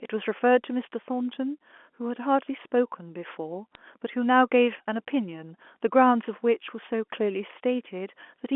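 At 3.75 s there are bit errors on a digital phone line. A few flipped bits, under a tenth of a percent, corrupted a handful of samples in the mu-law stream, on the narrow 250 Hz to 3.4 kHz telephone band.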